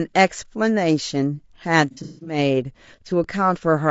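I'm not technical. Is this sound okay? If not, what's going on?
No, there are three problems.

All the way through, the speech sounds rough and grainy, a bit hissy and artificial, especially in the higher, brighter part of the sound, as if heard over a poor video call. This is low-delay AAC compression, a way of squeezing audio small enough to send quickly during live calls. Squeezed this hard, the fine detail of the voice gets replaced with a coarse approximation, which is likely what causes the roughness here.

From 1.91 to 2.38 s the sound turns smeared and noisy, a blurry patch rather than clear speech. This is AAC frame loss with concealment: small chunks of the audio went missing in transit, about a quarter of a second in total, spread across that stretch, with the longest gap lasting roughly a fifth of a second. The player filled each hole with a guess based on what it had just heard, and those guesses come out as mush.

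At 3.24 s there is a tiny break, about 5 ms, where the sound goes flat and then resumes. This is an underrun with held sample: the playback device briefly ran out of audio to play and simply froze on its last value until more arrived. The audio from that moment was lost.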